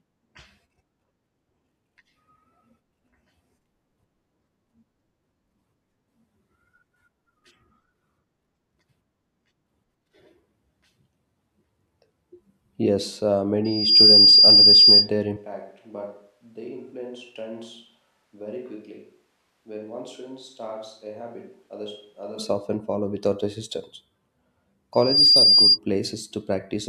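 Loudspeaker feedback squeal at 13.65 to 15.09 s and again at 24.93 to 25.79 s. The microphone picks up its own loudspeaker, and a 4.8 kHz tone swells within about a third of a second to a squeal around 15 dB, then 10 dB, above the speech. From 15.37 to 22.39 s, the speech turns roomy and hollow, drops about 10 dB and gains room noise, likely a switch to a distant microphone, starting just before "often follow without resistance".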